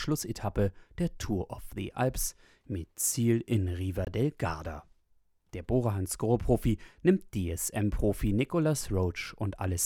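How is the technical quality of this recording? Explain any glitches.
There is one glitch in the speech. From 4.05 to 4.07 s, a Bluetooth stall cuts in: about 21 ms of silence, likely from the headphone buffer running dry while delayed packets were resent.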